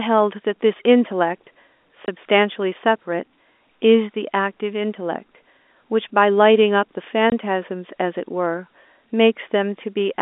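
At about 2.07 s and again from 7.30 to 7.32 s, single packets went missing and the receiver filled each gap with silence: packet loss filled with silence. Each 20 ms hole cuts the speech abruptly, with hard edges, over narrowband telephone audio.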